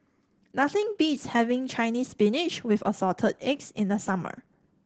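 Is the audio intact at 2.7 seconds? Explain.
No. Opus voice compression runs through the whole clip, so at 2.7 seconds the speech is coded by the SILK linear-prediction coder. The sound points to a low bitrate of around 12 kbps. Here SILK keeps only a wideband signal, discarding everything above 8 kHz, and quantises the excitation coarsely. The result at that moment is plainly audible damage: the speech sounds muffled, with a hoarse, slightly robotic edge.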